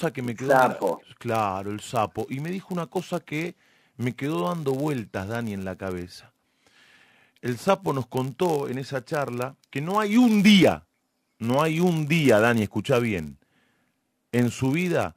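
Throughout the speech runs a block size mismatch (padded): each block arrives slightly short and is filled out with zeros, leaving a brief gap every block. The gaps produce a steady buzz at about 99.6 Hz, and the speech plays at 0.996 times normal speed with its timbre intact.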